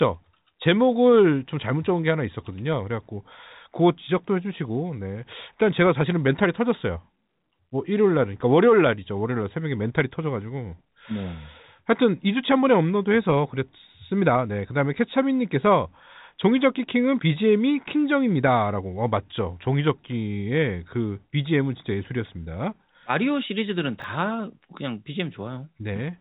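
At 24.0 to 24.04 s the speech gives a brief jumbled stutter: chunks out of order. A 20 ms piece of audio arrived late and played after the piece that should have followed it, which fits a single chunk swapped one slot out of place. Nothing is missing, but the sound jumps back and forward across three hard joins in about 40 ms, all within the narrow telephone band of the G.711 coding.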